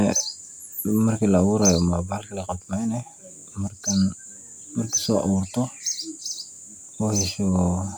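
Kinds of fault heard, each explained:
No kinds of fault are heard in this speech.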